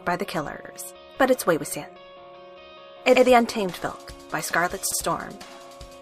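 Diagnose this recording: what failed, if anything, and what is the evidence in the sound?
The playback driver's buffer ran dry three times, and each time the device replayed its last block rather than waiting for fresh audio. This is a repeated buffer fault. At 0.65, 3.16 and 4.92 s, a stretch of about 93 ms, which fits a 4096-sample buffer, is heard twice in a row, with a hard join at each repeat. Because the segment is long, it comes across as a short stutter rather than a click, and afterward the audio resumes with essentially nothing skipped.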